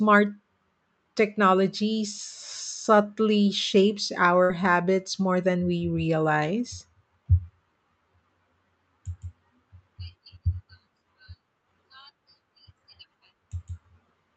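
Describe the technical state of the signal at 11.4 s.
At 11.4 s the speech is intact, with no dropout, glitch or other fault, and the call codec path carries it through as it normally would.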